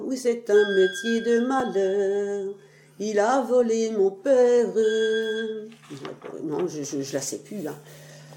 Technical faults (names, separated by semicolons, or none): repeated buffer